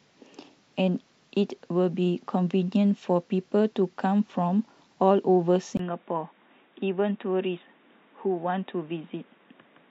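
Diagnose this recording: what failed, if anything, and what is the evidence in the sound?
At 5.77 s the speech drops out for about 20 ms, then returns dull and boxy, a few decibels quieter, with fresh background noise around 35 dB below the speech that continues to the end. This is likely an input switched to a poorer device at the capture stage, in the driver or device routing. A spectrogram would show content cut off sharply above 3.8 kHz from that point, a brief blank column at the switch, and a raised noise floor; the waveform steps down in level.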